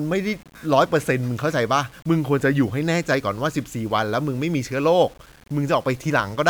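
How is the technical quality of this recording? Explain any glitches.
The technical quality is poor. Throughout the speech there is grainy, signal-following distortion about 30 dB below the voice, likely from low bit depth without dither, consistent with 8-bit rounding, so quiet passages sound gritty.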